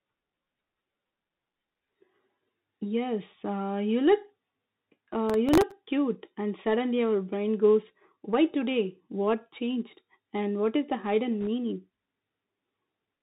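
Throughout, the speech passes through a Bluetooth CVSD headset codec, which fits a 64 kbps link that tracks the waveform one bit at a time with an adapting step. The codec damage is plainly audible: nothing above 4 kHz survives, sibilants turn scratchy, and a granular hiss sits underneath.

From 5.30 to 5.72 s, just before "cute and suddenly our", processor overload crackle occurs. The processor misses a run of very short buffer deadlines, which points to buffers under a millisecond with a dozen or more missed in a row. Each miss replays a hard-edged scrap of old audio, and together they produce a gritty tearing.

From 11.41 to 11.47 s, right after "what is the hidden", there are bit errors on the Bluetooth voice link. Flipped bits, at a rate of around one or two percent, nudge the one-bit step decisions the wrong way. Because each error carries little weight and fades out, the result is a brief rushing crackle rather than sharp clicks.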